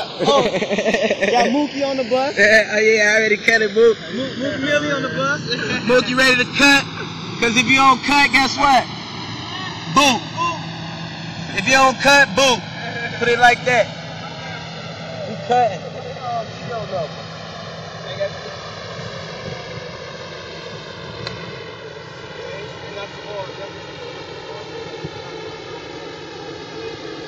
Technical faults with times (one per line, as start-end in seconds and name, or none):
0.00-27.27 channels drifting apart